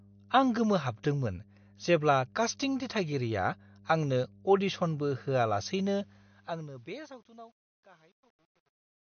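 Right from the start there's mains hum, a steady 50 Hz drone sitting roughly 30 dB under the speech. That's the power line leaking into the signal, most likely through a ground loop or a transformer close to the cabling, and it runs the whole way through.

The speech is also band-limited, with nothing above 6.5 kHz, and has a plainly audible watery, swirly quality. That points to MP3 compression, likely at a low bitrate around 48 kbps, where the encoder drops the treble and lets weak frequency components blink on and off from frame to frame.

From about 6.0 s the level fades out smoothly to the end, but that fade carries truncation distortion. It sounds like a 10-bit gain stage with no dither. The quiet tail turns grainy, and from 6.78 s it is at its worst, gritty as the waveform collapses into a few coarse steps.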